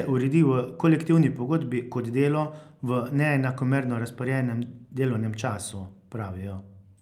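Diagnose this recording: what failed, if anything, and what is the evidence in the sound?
Nothing in this speech recording points to a failure at any stage of the chain. No event stands out in the sound that would need a time or a mechanism to explain it.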